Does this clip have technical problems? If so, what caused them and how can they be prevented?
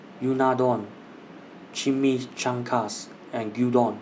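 No, there are no technical problems in this speech clip. With nothing going wrong, there is no cause to trace and nothing that needs preventing.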